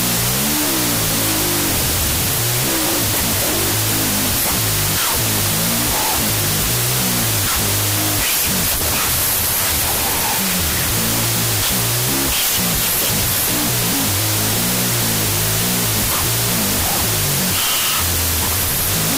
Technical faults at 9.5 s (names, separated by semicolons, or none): wrong sample width